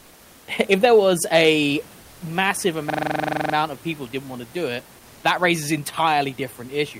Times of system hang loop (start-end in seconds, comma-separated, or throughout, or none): 2.90-3.54